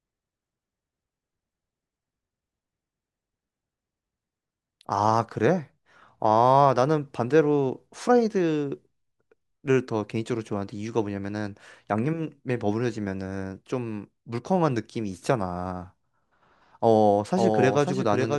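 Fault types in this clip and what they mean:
Doubled audio track: from 17.36 s, a second copy of the speech trails about half a second behind, somewhat quieter, likely from a slower path.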